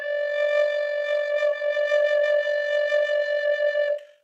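Throughout the music, overlap-add ripple is present: the frames were windowed and overlapped so that their gains don't sum evenly, leaving a level swing of about 6 dB roughly fifty times a second, heard as a rough, buzzy tremolo.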